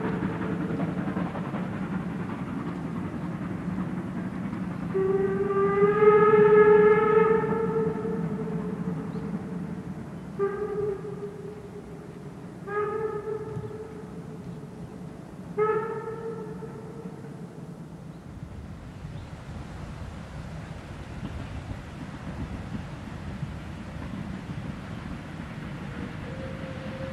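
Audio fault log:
Nothing stood out on listening to this clip.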